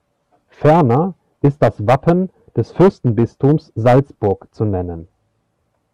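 A stage in the chain is being driven past its ceiling, so speech peaks are sliced flat, which is hard clipping. It happens from 0.65 to 0.97 s with roughly 6 dB of overdrive, then from 1.45 to 2.12 s and from 2.58 to 4.32 s at about 7 dB. The squared-off peaks throw harmonics high into the spectrum, giving the louder speech a harsh, crackling fuzz through each stretch.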